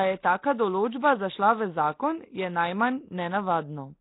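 Speech runs through the whole clip with heavy coding damage, most likely Nellymoser compression, the old Flash microphone codec. Nothing is present above about 3.8 kHz. Quiet bands have been given no bits and refilled with noise, leaving a rough, hissy halo around the voice and a smeared, underwater quality that points to a bitrate around 16 kbps. Unlike a plain low-pass filter or band-limited telephone audio, the damage here adds noise that wasn't in the original rather than only removing the top end.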